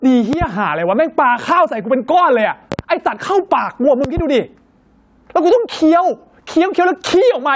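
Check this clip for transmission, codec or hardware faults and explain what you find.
Two faults are present in this speech: gain pumping throughout, and three pairs of loud pops, with the call's microphone processing cutting everything above 8 kHz.

Gain pumping runs through the whole clip. The level swings by around 10 dB, leaving the speech squashed and breathing. This is likely an input gain set far too high, with a fast limiter repeatedly clamping it down. On a waveform the envelope looks flattened.

Loud pops occur as pairs at 0.33–0.45 s, 2.72–2.83 s and 4.04–4.21 s, peaking roughly 10 dB above the speech for the first pair and about 15 dB for the other two. Each is a double sharp snap laid over the speech, which carries on underneath. The likely cause is a voltage step or spike from a connector, switch, static or driver glitch, shaped by the following circuitry. They appear as tall narrow spikes on the waveform and thin full-height vertical lines on a spectrogram, up to the 8 kHz ceiling.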